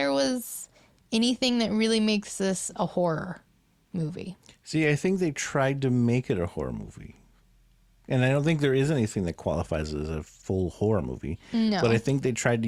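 A speech recording with nothing technically wrong that can be heard in it.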